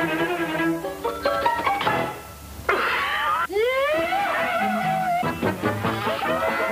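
A constant, even hiss sits under the audio for its whole length, roughly 20 dB below the signal, with no grit or distortion riding on the louder passages. This is low bit depth with dither. The signal has been reduced to very few levels, which fits a 7-bit signal. Random dither was added before rounding, so the rounding error becomes a steady white noise floor that does not track the audio.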